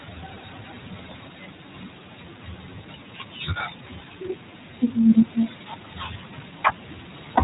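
From start to finish the speech sounds boxed-in, plainly rough and slightly synthetic, with nothing above 3.8 kHz. That is iLBC codec damage: narrowband coding rebuilds each short frame's excitation independently, a pattern that fits 20 ms frames at 15.2 kbps.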